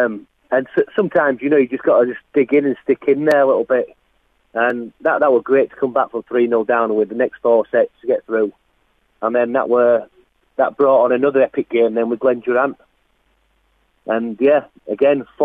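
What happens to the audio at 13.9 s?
Nothing goes wrong at 13.9 s: the audio plays through that moment intact, with no dropout, click, glitch or other fault.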